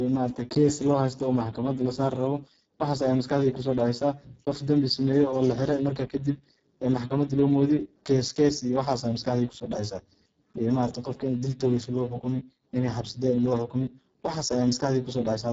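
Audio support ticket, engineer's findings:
Speex codec at a very low quality setting throughout, starved excitation bits: speech heavily hoarse, noisy and robotic, nothing above 7.7 kHz, with a noise-like fill above 4 kHz.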